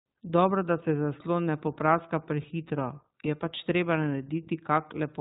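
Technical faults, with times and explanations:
Throughout, iLBC codec: narrowband coding strips everything above 4 kHz, so a spectrogram shows a hard ceiling, while independently coded 20 ms frames give the speech a rough, synthetic edge.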